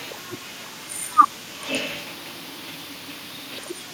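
Echo leak from 0.12 to 1.71 s and again from 2.1 s to the end: a faint copy of the speech trails it by 480 ms, quieter at first and a little stronger later, likely because a far-end echo canceller let its loudspeaker pickup slip back.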